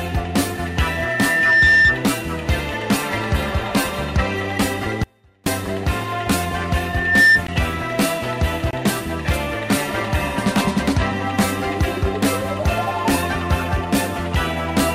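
From 0.52 to 2.06 s there's loudspeaker feedback squeal: a 1.8 kHz tone swells over roughly a second to about 10 dB above the sound as the mic-speaker loop runs away. At 5.04 s the audio drops out for 0.43 s to a faint residue about 35 dB down, likely the signal lost while the path stayed live. The squeal returns from 6.80 to 7.44 s, building in under half a second.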